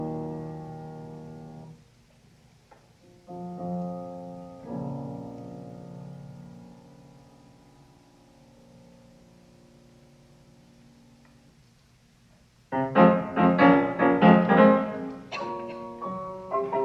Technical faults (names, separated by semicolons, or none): resampler restarted on every block